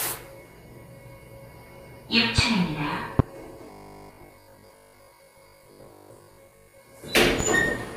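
At 3.19 to 3.22 s there's a loud pop, a sharp single hit standing well above the everyday sounds. That's likely a voltage spike from a switch, plug or static getting into the signal, and the sound carries on underneath it.

From 3.66 to 6.80 s there's robotic sound from repeated short buffers. The audio likely arrives too late, so the last 20 ms or so keeps looping while most of the real material is skipped. That sets a stiff 50 Hz metallic buzz over everything.

A second, somewhat softer pop comes at 7.40 to 7.44 s.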